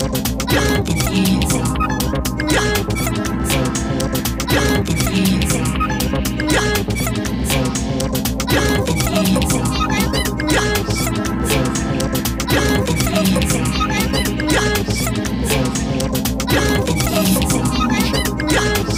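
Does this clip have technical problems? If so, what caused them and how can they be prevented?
No, nothing here calls for fixing, so there's no cause to chase down and nothing in particular to guard against.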